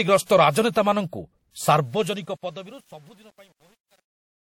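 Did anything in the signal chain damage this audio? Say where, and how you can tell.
Yes. The codec stage looks damaged: the whole clip carries artefacts of two flavours at once, with nothing above 19.3 kHz. That's likely transcoding between lossy codecs, something like a 48 kbit/s MP3 re-encoded into 64 kbit/s WMA, with each pass stacking its own junk.

There's also truncation distortion on the fade-out, from the gain stage at the end. From 1.77 s the decaying level gets grainy, and from 2.36 s to 4.43 s the grit is at its worst. The sound fits a fade computed at about 9 bits without dither, so quiet samples collapse into coarse steps.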